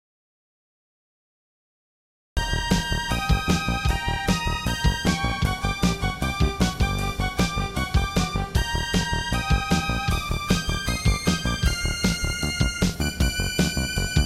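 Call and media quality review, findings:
Audio dropout to silence, 0.00–2.37 s, already in progress at clip start. Input path lost upstream; likely a disconnected capture device, failed link or stray mute, with the recorder still writing silence. Result: opening 2.37 s is silence, no room tone or noise floor at all. Sound then enters abruptly mid-flow. Any content during the gap is unrecoverable.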